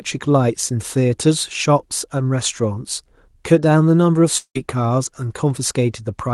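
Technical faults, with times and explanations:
4.37–4.57 s, long network dropout: about 0.18 s lost, bridged by a fading buzz then silence, longer than a single glitch; likely audio stopped arriving.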